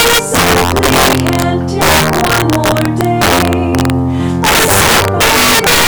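Violent, sharp cracks break out on the loudest moments across the whole clip, far harsher than ordinary clipping. This is integer overflow: the signal is driven about 9 dB too hot, and the roughly 7 percent of samples that exceed the integer limit wrap to the opposite sign instead of being held at full scale.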